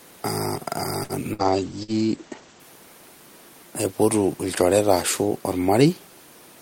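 A speech clip whose first two seconds carry several network faults. At 1.03 to 1.12 s a short stall from a late packet holds the sound for about 58 ms and then resumes at the same point. Nothing is lost, and the later timing simply slips by that amount, which sets it apart from a real dropout. Two bursts of packet loss follow, at 1.33 to 1.42 s and 1.83 to 1.91 s. Each fills roughly 50 ms with a continued, fading tail of the last sound, and about 60 ms of speech is gone when playback picks up further on. From 1.43 to 2.72 s a call bitrate drop makes the sound rough and muffled. The coding falls from 32 to 14 kbps for about 1.2 s at its lowest, and the high end is cut from 20 kHz to 8 kHz. That gives a sustained dullness rather than a brief gap.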